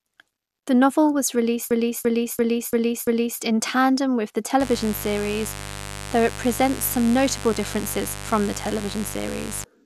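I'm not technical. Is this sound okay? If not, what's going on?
No. From 1.71 to 3.41 s there is a system hang loop: the computer stalled while the sound hardware kept replaying its last stored chunk. A 0.34-second piece repeats five times, about three times a second, giving a stuttering, stuck-record effect.

From 4.60 s to 9.64 s there is mains buzz. Electrical interference from the 50 Hz power supply leaks into the recording, probably through a dimmer, power adapter or poorly shielded cable. It sits fairly loud under the speech as a steady, raspy hum.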